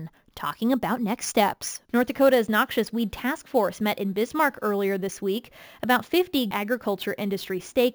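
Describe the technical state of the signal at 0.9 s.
At 0.9 s the speech carries imaging from sample-and-hold upsampling, present throughout the clip. It points to 16 kHz audio raised in rate by repeating samples without smoothing, leaving a mirrored copy between 8 and 16 kHz about 20 dB down. Unlike steady hiss, this metallic fizz follows the speech level and moves opposite to its pitch.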